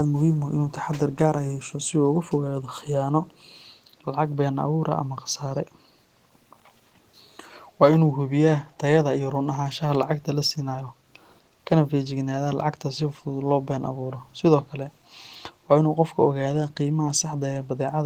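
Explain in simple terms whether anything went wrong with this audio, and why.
A faint, delayed copy of the speech, trailing about a quarter second behind, can be heard at 0.16–0.38, 1.63–1.9, 2.73–2.83 and 3.3–3.58 s. This is an echo leak, likely from a loudspeaker on the far end whose echo canceller let some sound back through.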